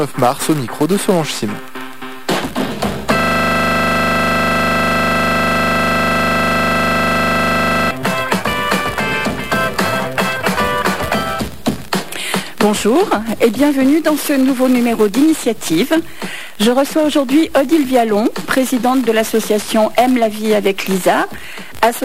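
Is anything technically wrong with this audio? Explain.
Yes. From 3.19 to 7.91 s there is a system hang loop: the system stalled while the audio hardware kept replaying one 40 ms ring buffer well over a hundred times. Repeating at 25 Hz, this identical fragment merges into a hard, rhythmic buzz.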